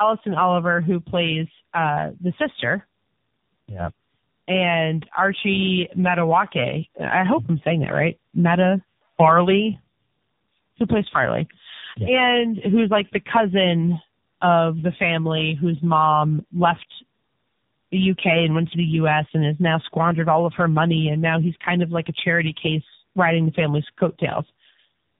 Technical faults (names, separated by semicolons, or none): tandem speech coding